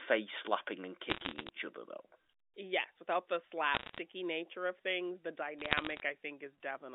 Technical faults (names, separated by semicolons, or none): bit errors on a digital phone line